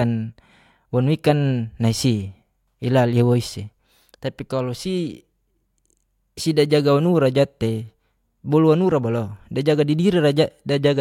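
No technical faults detected.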